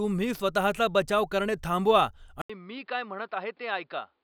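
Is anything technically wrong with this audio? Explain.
Yes. At 2.42 s the speech drops out for 80 ms, then continues to the end sounding duller and boxier, with nothing above 5.2 kHz, around 10 dB quieter, and a faint new background noise well beneath it. This is likely an input switched to a poorer device, a narrower-band microphone or headset call profile with its own tone and noise.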